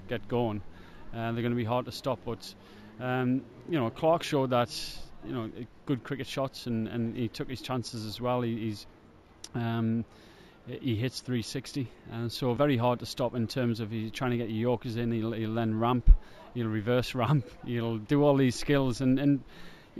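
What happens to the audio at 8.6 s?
At 8.6 s, as throughout, imaging from linear upsampling: straight-line interpolation, which fits a 16 kHz source raised to 48 kHz, leaves a faint mirror image between 8 and 16 kHz, around 30 dB down, heard as a light metallic shimmer on bright sound.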